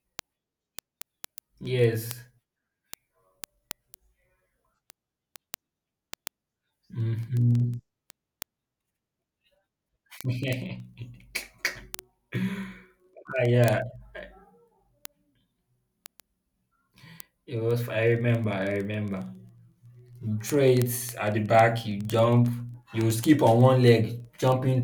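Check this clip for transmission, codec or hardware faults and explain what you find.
The clip has one clear fault: word clock ticks throughout the speech, from 0.1 s to 24.8 s. The digital link was read by a device on its own clock, unlocked to the sender, drifting by roughly 500 ppm. At each slip one sample is dropped or repeated, about twenty times a second, giving sharp ticks of uneven strength. A spectrogram shows evenly spaced thin vertical broadband lines. The waveform shows tiny single-sample steps.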